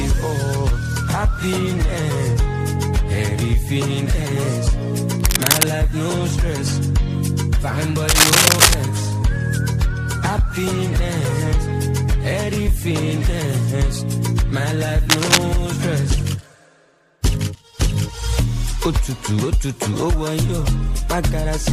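Bursts of harsh scratching and rustling cut across the sound from 5.20 to 5.63 s, 8.08 to 8.74 s and 15.10 to 15.38 s, level with the audio at first, then louder. This cable scratch noise likely comes from a worn connector or cable being moved.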